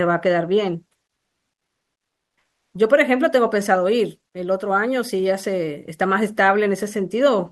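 From 1.13 to 2.73 s, about 1.6 s, the real background is replaced by comfort noise. The ambience, already about 62 dB below the loudest speech, loses its detail and becomes a steady, featureless hiss about 9 dB quieter, then snaps back when speech resumes. The likely cause is discontinuous transmission in the Opus call path: the sender stopped coding during the pause, and the receiver filled it with synthetic shaped noise. Throughout, the call codec limits the band to about 12 kHz.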